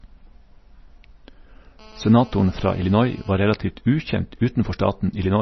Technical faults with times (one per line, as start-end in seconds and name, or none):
0.00-5.42 MP3 compression
1.79-3.34 GSM phone buzz